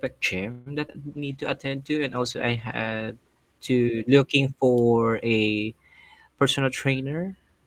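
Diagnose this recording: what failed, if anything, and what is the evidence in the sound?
Network and jitter buffer, a call audio freeze: from 0.51 to 0.68 s the speech stops advancing and the last sound is stretched into a fading buzz for about 147 ms. The audio then resumes where it left off with nothing lost, so the likely cause is delayed packets draining the buffer. On a spectrogram, the harmonics smear flat and decay across that span.

Network, short concealed packet loss: two brief holes, 0.88 to 0.91 s and 0.93 to 0.96 s, each about 20 ms of audio that never reached the decoder. The receiver patched them by extrapolating the preceding sound. You hear a quick smear or wobble. The waveform shows a short, overly regular stretch before the real signal blends back in.

Codec, a call bitrate drop: from 1.06 to 5.10 s the encoder falls from 40 to 15 kbps, holding the lowest rate for about 1.9 s after the bandwidth estimate collapsed. 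The speech turns rough and watery, and the spectrogram shows the upper band cut away and blotchy, coarse energy below it.

Jitter buffer slow-down: between 1.20 and 1.70 s the speech plays at 93% speed with unchanged pitch. Repeated pitch periods add about 43 ms to rebuild the buffer reserve. Sounds drag slightly. On the waveform, the periodic cycles look duplicated and the syllables are spaced wider.

Jitter buffer speed-up: from 6.35 to 7.63 s the speech runs at 110% speed at the same pitch. The receiver trimmed roughly 150 ms of pitch periods to shed excess delay, so the delivery sounds hurried. On a spectrogram, the syllables look compressed together in time.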